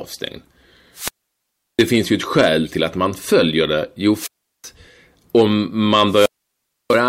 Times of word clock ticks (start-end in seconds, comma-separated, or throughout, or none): none